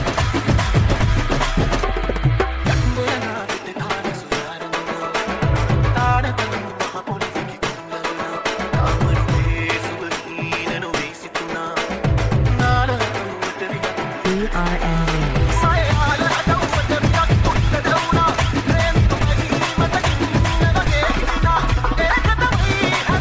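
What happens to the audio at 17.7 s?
Nothing goes wrong at 17.7 s: the audio there is intact, with no dropout, glitch or distortion, only the ordinary band limit of a wideband call path with nothing above 8 kHz.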